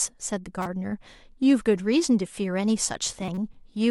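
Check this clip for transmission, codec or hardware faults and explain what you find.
Two faults are present, both corrupt frames decoded in this speech. At 0.61 to 0.66 s and 3.21 to 3.38 s, damaged compressed frames were played anyway, their misread data putting fairly loud energy at wrong frequencies, heard as a brief glitch and then a longer one.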